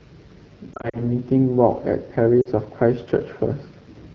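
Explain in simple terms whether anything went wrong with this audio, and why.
The whole clip has been through the AMR wideband (HD Voice) codec, the phone-network coding used for HD calls. It was running at one of its lowest settings. At that setting the speech sounds plainly rough and raspy throughout. Fine detail is replaced by a coarse imitation.

There are also lost AMR speech frames. Between 0.74 and 1.16 s, several short gaps cut in, the longest about 40 ms. The decoder briefly stretches the last good sound and lets it fade. That causes dips and warbles. A similar short drop happens at 2.41 to 2.48 s.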